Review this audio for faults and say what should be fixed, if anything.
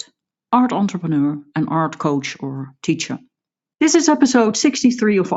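No faults found; nothing needs fixing.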